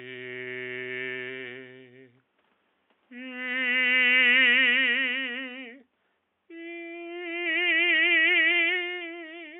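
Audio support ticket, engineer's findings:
No faults found in the music clip on listening. Nothing to escalate on the audio side.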